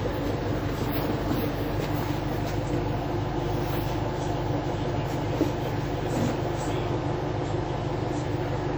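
A recording of everyday sounds, it rings and smears throughout, with a washy hiss that swells and fades with the signal and weak detail dropping out, though content reaches about 20.1 kHz. This is likely WMA compression at a low bitrate, consistent with roughly 48 kbps.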